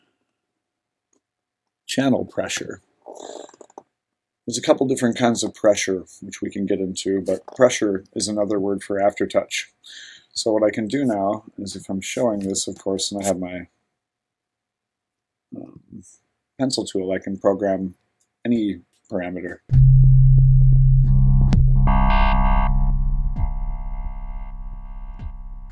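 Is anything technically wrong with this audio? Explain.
No, nothing technically wrong.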